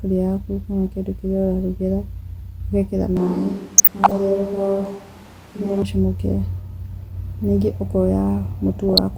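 A short speech recording with two separate problems. From 3.17 s to 5.82 s the sound suddenly goes roomy and hollow, with the low end thinned out and room noise rising to about 25 dB below the speech, though the level stays about the same. The abrupt change in and out points to a switch to a distant microphone, most likely a camera mic standing in for a close mic that dropped out. Layered inside that stretch, from 3.77 s to 4.11 s, there's a patch of DAB burbling over the speech. It happens when weak reception lets bit errors slip through DAB's error correction into the MP2 audio, so individual sub-bands jump in level for up to a frame. The length fits roughly 15 damaged frames at an error rate of around half a percent. A shorter burst of the same burbling turns up again from 8.88 s to 8.98 s, consistent with about five hit frames.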